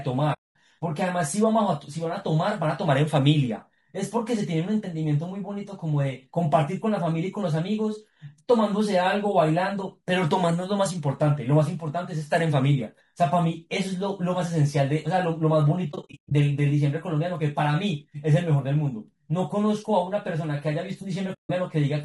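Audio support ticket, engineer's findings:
Encoder, likely low-delay AAC compression (AAC-ELD) at a low bitrate, around 32 kbps. Short frames resolve harmonics poorly, starving bits. Speech plainly rough and grainy throughout, noise filling gaps between harmonics, top band dull or synthetic-sounding.

Decoder, AAC frame loss with muting. Missing frames' spectra zeroed, overlapping windows fading sound out and back in. Soft-edged silent holes: 0.33–0.56 s (about 220 ms), 15.91–16.32 s (scattered gaps, longest around 100 ms), 21.33–21.50 s (about 160 ms).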